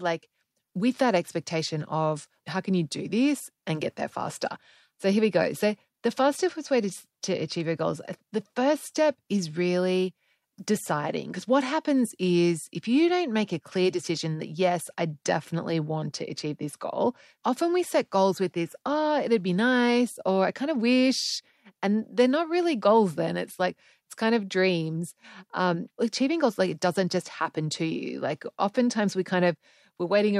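Nothing here stands out as a technical fault; the speech just rolls along without anything worth flagging.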